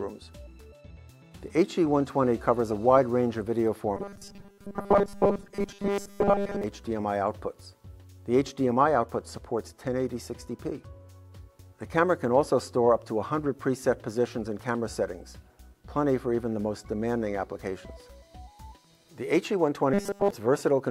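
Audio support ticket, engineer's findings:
Robotic sound from repeated short buffers, 3.97–6.64 s and 19.94–20.31 s: rigid metallic buzz at 200 Hz. The likely cause is audio starvation, with the player looping about 5 ms chunks. Most of the first stretch and all of the second is replaced.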